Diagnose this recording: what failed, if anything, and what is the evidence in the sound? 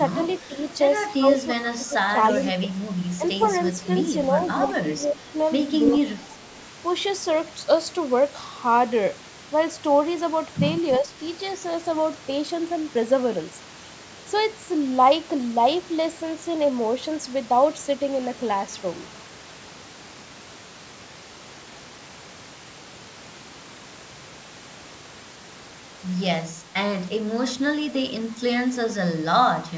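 Speech suppressed in double talk at 0.15–3.4, 4.68–6.35 and 11.0–11.13 s. The speech dips by up to about 15 dB, likely the call's echo canceller ducking during overlap.

Echo leak too: a faint copy trails 336 ms behind at 0.28–0.74, 2.3–6.64 and 10.93–10.98 s, likely from a speakerphone's incomplete echo cancellation.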